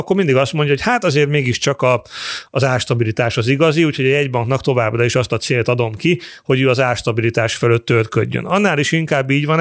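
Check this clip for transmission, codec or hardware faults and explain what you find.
One fault runs through the whole speech clip: the resampler restarted on every block. Each 250 ms block was converted on its own, which fits a 24 kHz to 16 kHz conversion, so the filter saw no true neighbouring samples at block edges. Those edge errors produce a regular tick at 4 Hz, heard only while signal is present.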